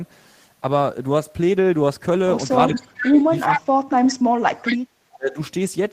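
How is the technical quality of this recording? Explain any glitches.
Quality drops noticeably in the second half of the speech, where two echo-control faults overlap.

Speech suppressed in double talk occurs from 2.69 to 4.57 s and again from 5.15 to 5.38 s. The talker's level dips, by roughly 40 dB at worst in the first stretch and about 25 dB in the second. The likely cause is an echo canceller that could not separate near speech from loudspeaker echo while both sides were active, so it attenuated everything.

Echo leak appears at 2.75–2.82 s, 3.06–3.10 s, 3.46–3.61 s and 4.64–4.77 s. These are short, delayed copies of the voice arriving 375 ms late. They range from about 15 dB below the speech to roughly equal in level at 3.46 s. This likely comes from a loudspeaker endpoint whose canceller failed to remove all of the echo picked up by its microphone, returning fragments to the line.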